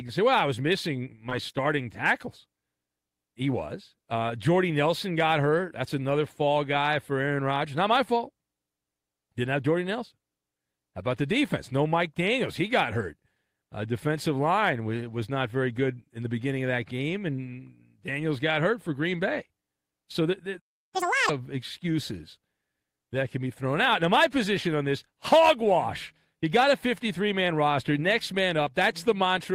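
At 20.59 s the speech simply drops out, and nothing comes through until 20.95 s, a gap of about 0.34 s right in the middle of the flow. That's a playback stall. The most likely cause is the player running dry on data or its output thread getting blocked, so the device had nothing to play for that stretch. You hear it as a clean hole of silence.

Right after, from 20.95 to 21.29 s, there's catch-up at higher speed. The player chews through its backlog by resampling at 2.0 times normal rate, so for roughly a third of a second the speech comes out doubled in tempo and jumped up close to an octave in pitch, giving it a squeaky, chipmunk quality.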